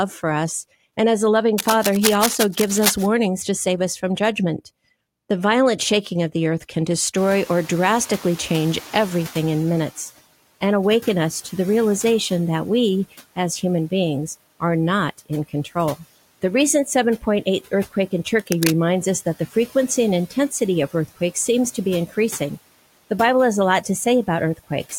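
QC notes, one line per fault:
1.58–3.09 s and 18.38–18.79 s, cable scratch noise: dense, irregular bursts of scratchy rustle sit over the speech, only a few dB below it. This likely comes from a worn cable or connector being moved, so the contact resistance jumps about rapidly. On a spectrogram the bursts show as ragged broadband smears with vertical streaks. The waveform shows jagged spiky clusters riding on the speech envelope, the first lasting about 1.5 s and the second about 0.4 s.
7.17–10.11 s, noise suppressor catching up: the room noise climbs by about 25 dB at roughly 7 s. At first it passes through with little reduction, then fades over about 2.9 s as the suppressor's noise estimate adapts, by which point it has been cut by about 10 dB. Right after the rise it sits about 21 dB below the speech. On a spectrogram the noise floor jumps up as a bright band and then darkens gradually. 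The noise in the waveform's gaps between phrases shrinks slowly over the same span.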